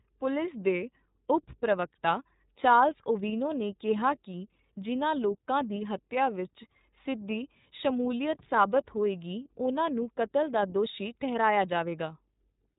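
Speech run through the iLBC codec for the whole clip, and the damage is plainly audible: a rough, slightly synthetic edge and nothing above 3.8 kHz. Each frame is coded on its own, and the sound fits 30 ms frames at around 13.33 kbps.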